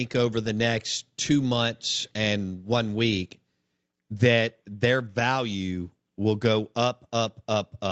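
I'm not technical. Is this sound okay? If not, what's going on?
Yes, I hear no faults in this speech recording.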